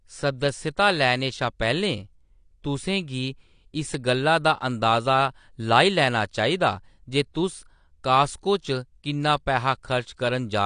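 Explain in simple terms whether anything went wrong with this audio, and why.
AAC compression, running through the whole clip from start to finish, is the likely cause of what you hear: the speech sounds dull and smeared, with a fizzy, warbling edge on hissing sounds. To save space, this kind of compression throws away the parts of the sound it judges least noticeable. Here it was squeezed hard enough that everything above about 9.8 kHz is simply gone, which removes the crisp top end.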